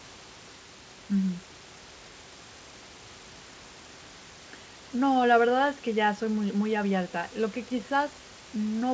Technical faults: none

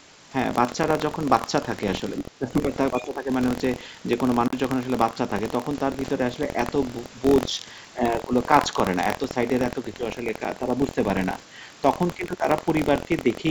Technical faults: buffer tearing; speech suppressed in double talk; Bluetooth dropout

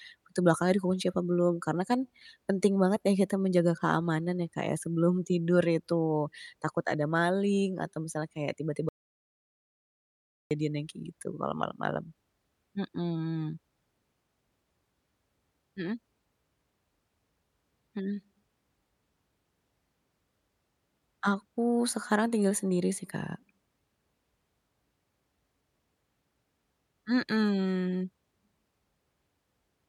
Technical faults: audio dropout to silence

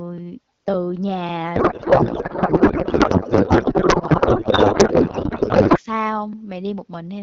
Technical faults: codec payload misread

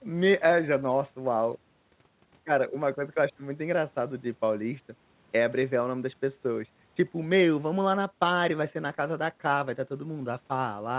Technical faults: none

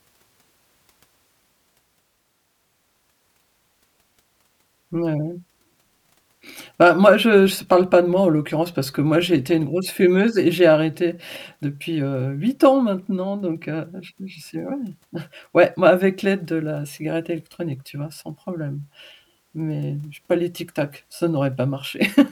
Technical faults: none

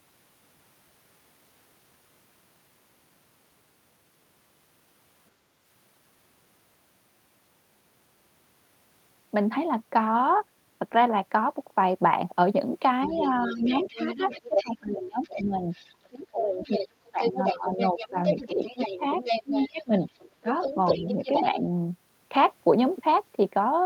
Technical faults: speech suppressed in double talk; other side's voice leaking through

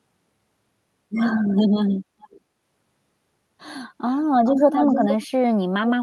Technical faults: echo leak

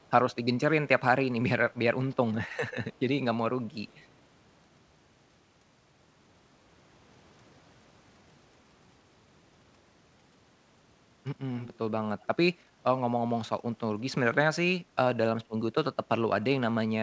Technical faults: echo leak

